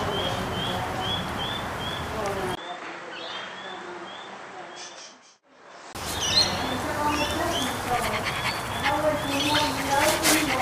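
From 2.55 to 5.95 s the input likely switched to a poorer device. After a 20 ms silence at the switch, nothing above 8.3 kHz comes through, the level falls by about 10 dB, and a new noise floor appears far below the signal before the fuller sound returns.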